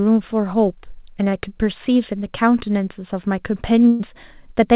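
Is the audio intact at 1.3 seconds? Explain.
No, short concealed packet loss hits 1.30–1.34 s: about 20 ms never arrived, and the receiver extended the preceding sound to fill it, giving a brief smear rather than a silent gap.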